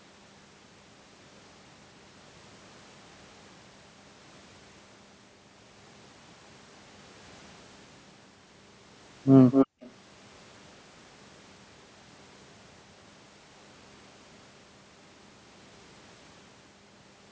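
From 9.51 to 9.91 s, a copy of the speech trails about 250 ms behind, only slightly quieter. This is likely an echo leak, where a loudspeaker echo slipped past the far-end canceller, unlike a room reverb tail.

From 9.67 to 9.81 s, the room sound briefly drops by about 40 dB and then returns. This is background gated by the echo canceller: a sudden level cut while the loudspeaker plays, not a network dropout that would lose the speech too.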